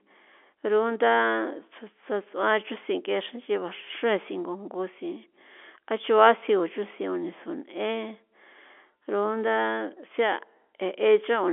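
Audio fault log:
Nothing here needs flagging; it's ordinary telephone-line speech through G.711 mu-law coding, with the usual 300 Hz to 3.4 kHz band and nothing above about 3.7 kHz.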